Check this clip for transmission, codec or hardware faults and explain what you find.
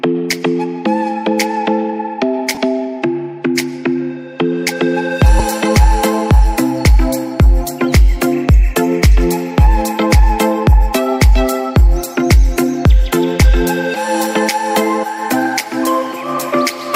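Two short dropouts from lost LE Audio frames, at 2.55 to 2.57 s and at 5.39 s. The Bluetooth LE Audio link dropped frames, and the LC3 decoder filled the gaps with the previous spectrum under random signs. The first gap spans about 22.5 ms, which fits three 7.5 ms frames; the second fits one. Each sounds like a brief noisy smear.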